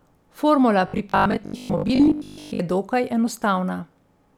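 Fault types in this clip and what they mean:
Robotic sound from repeated short buffers: From 0.88 to 2.60 s the speech becomes a rigid, metallic buzz fixed at 50 Hz. Most of that stretch sounds repeated rather than new. The buzz fits a 20 ms buffer, likely replayed while audio arrived too slowly.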